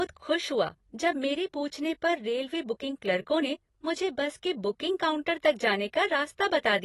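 From start to finish the speech is dull and smeared, with nothing above 12 kHz and a warbling, fizzy edge on sibilants. That points to likely AAC compression at a low bitrate around 32 kbps, since a simple low-pass filter would leave no such warble.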